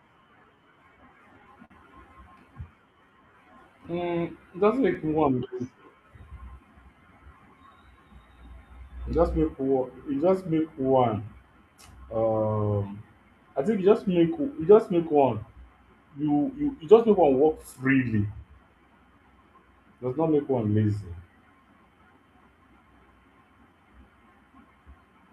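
Speech, carried across a link with clock drift between sender and receiver: the sending clock runs roughly 4% slower than the receiving one, so the jitter buffer keeps draining and the receiver has to stretch the audio to keep up. On a spectrogram this shows as harmonic tracks and syllable spacing subtly elongated compared with natural pacing, with no clean break to mark it. The result is repeated timing corrections from 0.20 s to 25.27 s, playing at about 96% speed and adding around a second in total. The small repeated pieces appear on a waveform as faintly duplicated cycles at uneven spacing. At 1.65 s there is a short stall from a late packet: the buffer ran empty and the last sound was held for 53 ms until the data arrived, with nothing lost. It comes through as a brief held sound, visible as a flat, frozen spectral band lasting about 53 ms.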